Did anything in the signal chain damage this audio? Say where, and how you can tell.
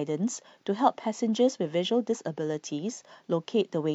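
No, nothing in the signal chain damaged this audio.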